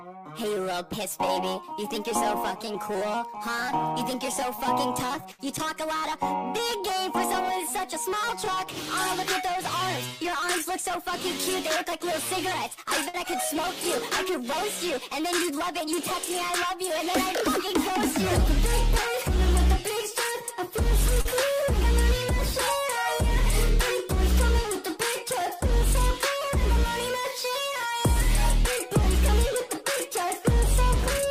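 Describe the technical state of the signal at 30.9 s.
At 30.9 s the signal is intact, with no audible fault at that moment.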